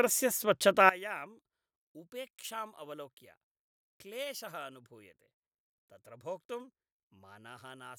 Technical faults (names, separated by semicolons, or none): one channel inverted